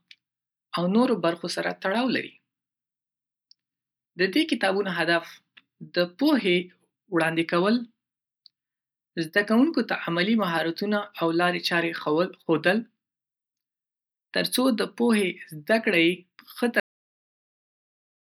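A cut-off end arrives at 16.80 s, where the speech stops in the middle of a sound rather than finishing. The final stretch of audio was never written out or played back, so there is no natural decay or trailing room tone. The signal falls straight to digital silence, which holds for the remaining 1.55 s. The result is an abrupt, unfinished stop that a listener hears as the recording being chopped off.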